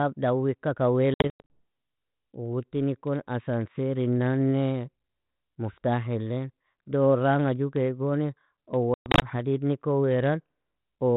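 Packet loss on an ADPCM call hits from 1.14 to 1.60 s and again from 8.94 to 9.23 s. Each time, around ten packets vanish: 240 ms of audio lost across 360 ms (longest gap 100 ms), then 180 ms across 280 ms (longest 120 ms), heard as abrupt silent holes. Because ADPCM tracks a running prediction and step size, the receiver's decoder loses sync with the sender, so the sound re-enters slightly distorted before settling, on a light-sounding ADPCM link that fits 32 kbit/s G.726.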